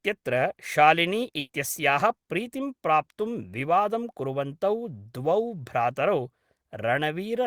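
At 1.39 s the speech hits a burst of packet loss lasting until 1.51 s. The receiver fills about 100 ms by extending and fading the last sound, heard as a brief held buzz or hiss, then resumes with roughly 100 ms of speech missing.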